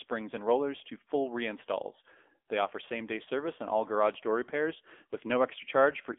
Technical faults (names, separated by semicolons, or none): AMR narrowband mobile codec